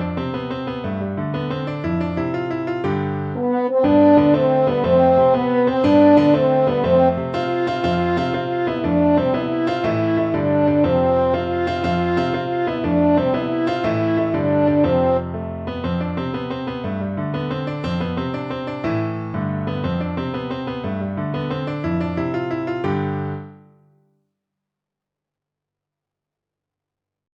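No audible faults anywhere in the recording.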